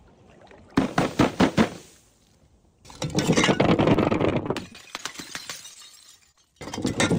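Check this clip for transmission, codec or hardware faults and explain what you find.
Packet loss affects the second half of the clip, first as a sustained burst and then as three short losses.

Repeated packet loss (robotic sound) runs from 3.93 to 5.00 s. Eight gaps occur, the longest 21 ms. Each is patched by continuing the previous sound, so the stretch turns choppy, with pieces missing.

Short concealed packet loss follows at 5.74 to 5.77 s, 6.31 to 6.36 s and 6.36 to 6.39 s. Late or lost packets were filled by extending the last sound and blending back, heard as brief smears or wobbles.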